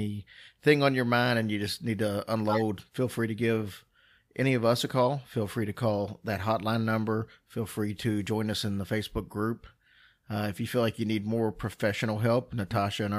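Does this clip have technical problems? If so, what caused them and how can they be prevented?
Yes, there's a corrupt frame decoded between 2.49 and 2.61 s, right after "you just need to" and before "feel free to give". Flipped bits in a few compressed frames got played anyway, throwing energy into the wrong frequencies as a burst peaking around -15 dBFS. Adding error detection and concealment, so damaged frames are muted or interpolated rather than decoded, would prevent it.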